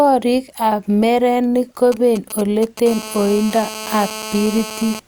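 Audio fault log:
1.92 to 2.88 s, GSM signalling bursts: a galloping dit-dit-dit of short buzzy bursts sits on the speech, roughly 15 dB below it. That's a 2G phone nearby waking up to signal to the network, sending only brief clusters of transmissions, and something in the audio chain rectifies those radio pulses into sound. Inside each cluster the pulses come about 217 times a second, hence the little buzzes rather than plain clicks.
2.89 to 5.00 s, GSM phone buzz: right after the signalling, the pattern locks into a continuous hard, raspy buzz at about 217 Hz, roughly 13 dB under the speech and slightly louder than the bursts before it. The phone has gone into a call and now transmits in a steady stream of pulses at that rate, so the rectified interference becomes constant. It's rich in harmonics and has nothing to do with the speech, which is why it sounds so harsh against it.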